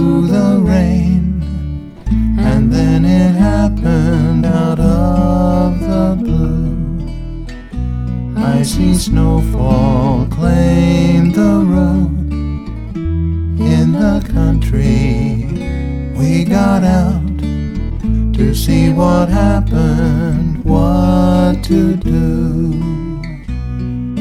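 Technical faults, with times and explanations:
Not a single technical fault can be heard anywhere in the clip. Nothing in the audio points to a problem in how it was captured, processed or delivered.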